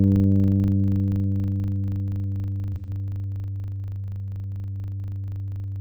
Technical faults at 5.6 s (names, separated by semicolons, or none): filter restarted on every block